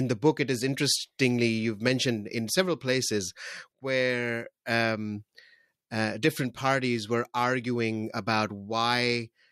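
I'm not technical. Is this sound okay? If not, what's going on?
Yes, nothing in this recording stood out as a problem when I listened to it.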